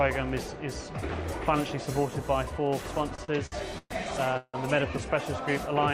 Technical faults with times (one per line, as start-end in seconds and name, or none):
3.15-3.92 repeated stalls (stutter)
4.37-4.56 call audio freeze